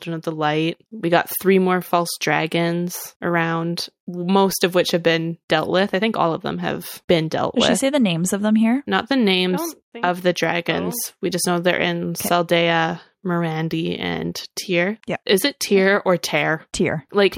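From 0.05 to 1.3 s, just before "three more false dragons", the level climbs by about 5 dB as automatic gain rising takes hold. The gain control judged the opening input too quiet and eased its gain upward over that second and a quarter, so the speech and the room noise swell together. On a waveform the envelope widens steadily across the span, and a spectrogram brightens evenly at every frequency, noise floor included.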